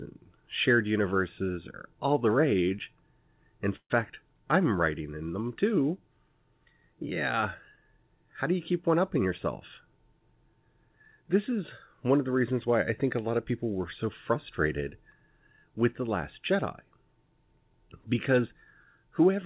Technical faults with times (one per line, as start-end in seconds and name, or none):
3.76-3.92 call audio freeze